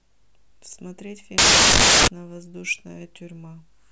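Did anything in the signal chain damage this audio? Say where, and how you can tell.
Yes. From 1.38 to 2.08 s the speech gives way to loud, harsh broadband noise for about 0.7 s, and then the speech returns intact. That is samples built from the wrong bytes at the sample-format conversion stage: the bytes of each sample were assembled misaligned or in the wrong order, so the rapidly fluctuating low-order bits landed in the most significant positions and swamped the real waveform.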